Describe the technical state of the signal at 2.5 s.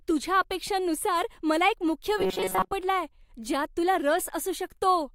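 At 2.5 s the signal sits inside robotic sound from repeated short buffers, running 2.18 to 2.73 s, just after "अपेक्षांनुसार मला एक मुख्य". Audio likely arrived too seldom, so a tiny buffer of about 5.3 ms was looped over most of the span, forcing a rigid metallic buzz near 188 Hz.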